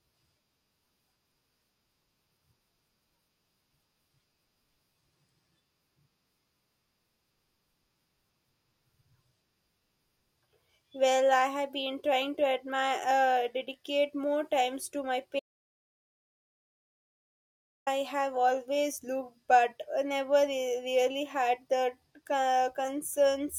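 An audio dropout to silence runs from 15.40 to 17.87 s in this speech clip, just after "more times to my" and resuming at "have always looked but". For about 2.5 s the sound drops to silence with no room tone, likely because the input signal was lost while recording continued, so that stretch of speech is gone.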